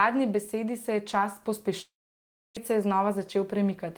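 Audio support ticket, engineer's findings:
Sound cuts to a fading buzz, then near silence, 1.81–2.59 s; about 0.64 s lost, not replayed. Likely long network dropout, receiver concealment decaying out.

Sound runs hurried at unchanged pitch, 2.71–3.86 s, about 6% fast. Jitter buffer speed-up trimming pitch-period chunks, roughly 70 ms total, draining excess buffered delay.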